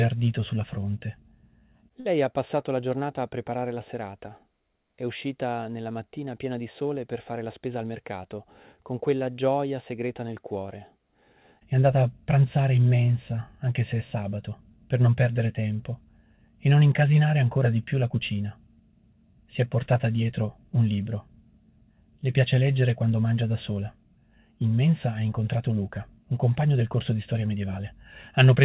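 The audio comes through a call path that sounds like G.711 mu-law telephony, with nothing above 4 kHz. At 2.0 s there's a short stall from a late packet: the jitter buffer ran dry, so the receiver held the last bit of sound for about 51 ms, until the packet showed up, and then carried on where it left off. Nothing is lost, but that moment drags slightly and the delay grows by the same 51 ms. Later, from 7.47 to 7.9 s, there's a jitter buffer speed-up. The buffer was holding more than it wanted, so the receiver kept trimming tiny pitch-period slices, around 40 ms in all. That stretch plays at about 109% speed with the pitch unchanged, so it comes across as a little hurried.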